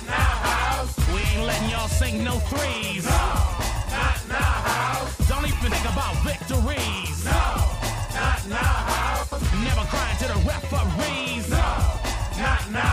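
At 3.59 s, 5.52–5.71 s and 9.22–9.42 s, frames come out of order. Two adjacent runs of frames were swapped before decoding. Each short stretch plays with its halves reversed. The result is a garbled flutter. No time is lost.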